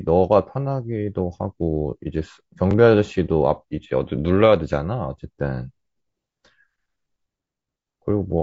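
Throughout the speech there is plainly audible roughness and graininess, with noise filling the gaps between harmonics. This is likely low-delay AAC compression at a low bitrate, consistent with AAC-ELD around 32 kbps. Its short frames blur pitch detail, unlike broadband hiss, which would sit evenly under everything. At 2.71 to 2.74 s and again at 5.74 to 5.76 s, a brief stutter marks overlapping chunks. Each new 3-second chunk began about 23 ms before the previous one ended, so that slice plays twice. It is a doubled repeat, not a dropout gap.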